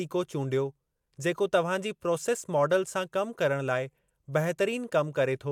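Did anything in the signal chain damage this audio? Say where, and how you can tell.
No, nothing anywhere in the chain seems to have left a mark on this speech, so there's no stage to point at.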